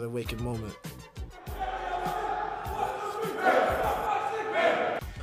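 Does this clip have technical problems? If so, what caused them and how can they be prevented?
Yes. From 0.52 to 1.28 s the sound abruptly slows by 5.71% and drops 102 cents, about a semitone, then snaps back to normal. This is a drift correction step, likely from clock-matching software that changed the playback rate in a single jump to rebalance its buffer. Unlike wow or flutter, which wobble continuously, the pitch here holds steady at one lowered level, with a clean shift at each edge. Preventing it means locking both devices to a shared clock or using a resampler that corrects drift in small, gradual adjustments.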